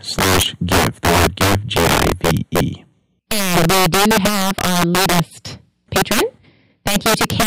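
Integer overflow runs through the whole speech clip. The gain pushes the signal about 9 dB past what the integer format can hold, and instead of being limited, anything beyond the maximum wraps around to the opposite sign, flipping across the full range. Roughly seven percent of samples land over that limit, so the louder stretches of speech get hit, and each crossing comes out as a crack that's much sharper than ordinary clipping.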